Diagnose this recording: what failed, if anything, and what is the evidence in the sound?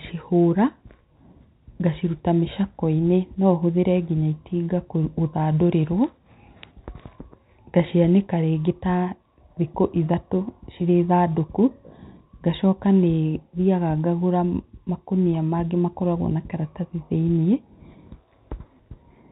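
Nothing failed: no stage from the wiring through to playback leaves any audible mark on this speech recording, so there is no fault evidence to report.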